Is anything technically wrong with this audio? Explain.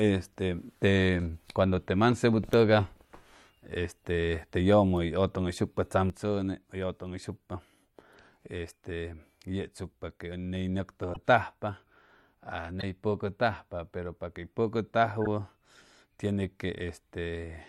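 Yes, there are two separate problems in this speech clip.

From 6.10 s right through to the end, the level falls abruptly by about 6 dB and stays down. That's the signature of one channel dropping out, and the likely cause is that one side of the stereo pair went dead before the mix was folded to mono. Everything shared between the channels loses half its contribution, so the speech simply sounds quieter for the rest of the clip.

Then there are three short glitches: 11.13 to 11.17 s, 12.80 to 12.83 s, and 15.22 to 15.27 s. Each sounds like a brief chirp or burst of noise, and the last one is a little louder, peaking somewhere around -20 dBFS against roughly -25 for the other two. They're corrupt frames that got decoded anyway. Flipped bits in the compressed data made the decoder misread gains or spectral codes, so energy landed at the wrong frequencies for the span of one or two damaged frames.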